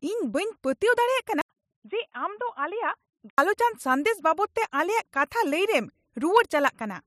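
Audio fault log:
1.41–3.38 s, input switched to a poorer device: after an 80 ms flat gap in the waveform, the speech turns dull and boxy, a little quieter over a faint new noise floor. The spectrogram shows nothing above 3.8 kHz until full bandwidth returns, likely a narrower-band microphone.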